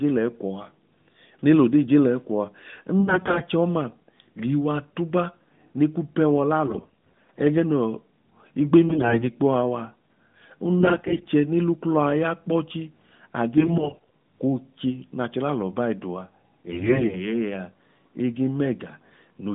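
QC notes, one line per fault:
3.00–3.44 s, 6.66–7.41 s, 8.88–9.25 s, 10.80–11.29 s, 13.58–14.11 s, 16.72–17.28 s, AMR bit errors: the speech turns hoarse, scratchy and gargly just before "chọọma liiwa tuba ne", just after "tuba ne ku pẹ", before "oche n'achọ lalọ bai" and elsewhere. Flipped low-priority bits misplace excitation pulses and skew fine pitch, gain and spectral values. Unlike frame loss, which gives gaps or smeared repeats, pitch and level hold and only the texture breaks up.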